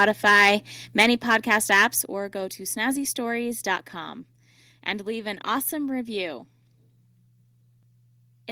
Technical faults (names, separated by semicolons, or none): microphone overload; microphone volume stepped down